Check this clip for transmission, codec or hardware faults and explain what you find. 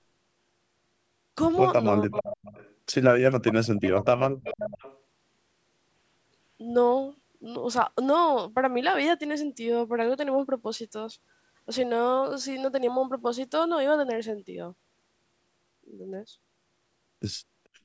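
Two call-path faults appear in the first five seconds of this speech: the talker's level collapses twice, and a delayed copy of the voice leaks back three times.

Speech suppressed in double talk: From 2.06 to 2.52 s the voice sinks by about 20 dB for roughly a third of a second. From 3.43 to 4.86 s it falls much further, down by about 40 dB at its deepest, with around a second lost in all. The likely cause is an echo canceller that, with both sides talking at once, could not tell the local talker from loudspeaker echo and turned everything down.

Echo leak: A delayed repeat of the voice trails about 0.44 s behind the original. It is heard from 2.13 to 2.74 s at about 10 dB below the speech, from 4.44 to 4.54 s at about 15 dB below, and from 4.85 to 5.0 s at about 25 dB below. The lag is identical each time, which points to a single echo path. This likely comes from a loudspeaker on one side of the call whose canceller failed to remove all of the sound its microphone picked up, so that residue was sent back down the line. 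The band-limiting of the call microphone processing, with nothing above 8 kHz, is ordinary for a call.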